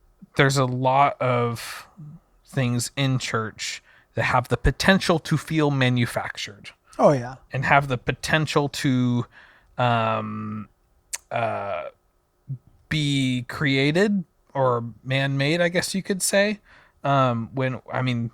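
Nothing stood out as a technical fault when listening to this speech recording.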